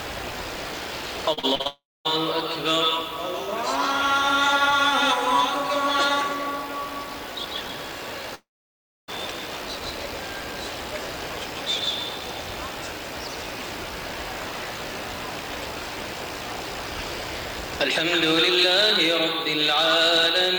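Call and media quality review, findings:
Low bit depth with noise shaping, throughout: audio quantised to about 8 bits, with the rounding error pushed toward high frequencies. Heard as a constant thin hiss, about 20 dB below the signal, rising strongly toward the top of the band.

Repeated packet loss (robotic sound), 1.33–1.67 s: network delivery failing repeatedly. Concealment patches four short holes, the longest 43 ms, covering nearly half the span. Heard as choppy, robotic audio with fragments missing.

Long network dropout, 1.67–2.07 s: likely a stall in network delivery, directly after the choppy stretch. The last sound is extended briefly, then about 0.25 s of silence before audio resumes, with the lost portion gone.

Long network dropout, 8.35–9.10 s: likely a stall in network delivery. A brief concealment tail fades into about 0.65 s of silence, then audio resumes with roughly three-quarters of a second of content never played.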